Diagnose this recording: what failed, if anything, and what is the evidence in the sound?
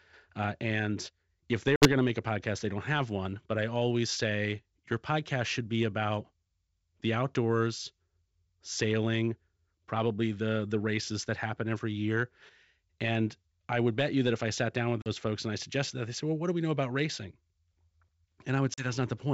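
Network stage: packet loss on an ADPCM call over G.722. Hard-edged silent gaps at 1.76–1.88 s after "and if they", 15.02–15.08 s after "I sat down with", and 18.74–18.88 s appear as blank spectrogram columns and flat waveform stretches. The decoder's predictor and step size then mismatch the sender's, so speech returns slightly distorted before settling.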